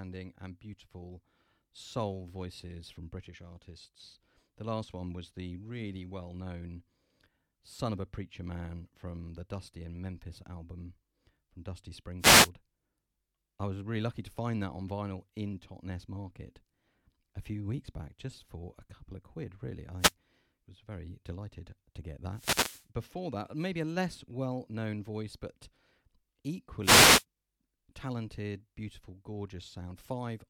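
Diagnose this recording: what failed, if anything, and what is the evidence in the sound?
Wireless microphone noise hits in the analogue FM radio link before conversion: static swishes at 12.19–12.50 s, 19.98–20.13 s (after "couple of quid really"), 22.31–22.87 s (before "before that maybe") and 26.82–27.25 s. Multipath cancellation fades the carrier and receiver noise rises. Unlike a network dropout, the sound is hiss-covered, not silent.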